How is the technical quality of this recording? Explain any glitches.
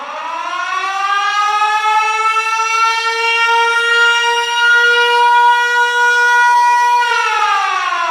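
The recording's technical quality is sound, with no glitches or transmission faults audible anywhere in the audio.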